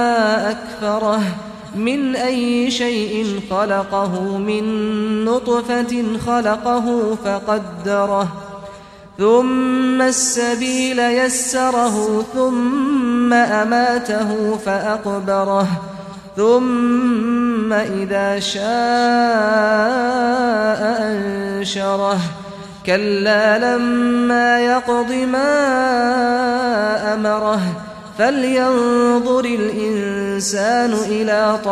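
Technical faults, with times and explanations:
Nothing technical jumps out anywhere in this one, so there's no fault to list.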